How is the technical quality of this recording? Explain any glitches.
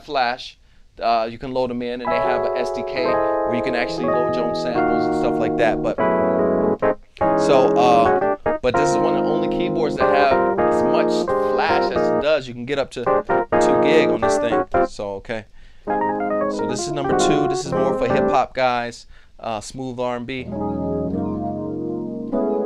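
No glitches or technical faults can be heard here.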